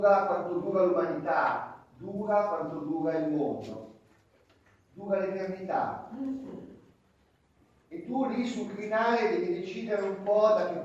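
No technical faults occur in the audio, so there are none to describe in time order.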